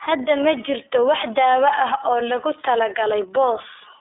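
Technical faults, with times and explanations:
throughout, iLBC codec: the speech is band-limited to 300 Hz to 3.6 kHz, with nothing above 3.7 kHz, and sounds plainly rough and synthetic from independently coded blocks, which fits 30 ms frames at 13.33 kbps; spectrograms show an empty band above the cut-off.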